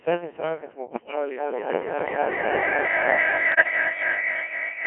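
Speech throughout passes through the Codec 2 vocoder, which sends only pitch, voicing, energy and a coarse spectral envelope and rebuilds the voice from sine waves, so the original waveform is gone. The damage is heavy: a robotic, buzzy tone squeezed into a 300 Hz to 3.4 kHz band. The thinness of the detail fits a rate of about 1.6 kbit/s.

From 0.88 to 1.16 s come bit errors on digital voice radio. Flipped bits corrupt the frame parameters, at a rate of roughly one bit in ten, over what sounds like several consecutive frames. Pitch, level and tone colour lurch, and the voice collapses into warbling bleeps and garbled robotic noise.

From 3.52 to 3.70 s, milder bit errors again scramble a few frames. They produce a shorter burst of pitch jumps and chirpy gibberish.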